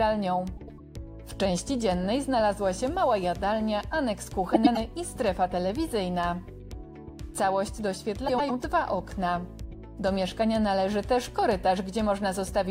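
At 0.57–0.80 s, 4.54–4.77 s and 8.28–8.51 s, frames out of order swap two adjacent blocks of about 105 ms, playing each stretch's halves reversed. It sounds like a garbled flutter, visible as abrupt waveform and spectrogram discontinuities.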